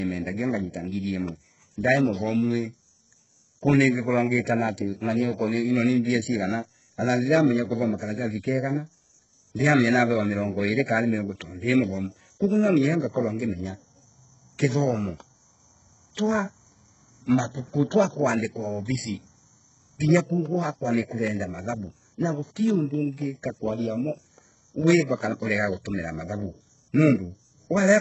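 From start to finish the speech carries heavy codec damage, most likely HE-AAC compression at a very low bitrate, around 8 kbps. The lower band is coded sparsely while the upper range is rebuilt by spectral band replication, so s sounds come out gritty and metallic rather than simply dull, and nothing reaches above about 7.9 kHz. Unlike a plain low-pass filter, the treble is still present but synthetic, with harmonics that fail to line up across the crossover.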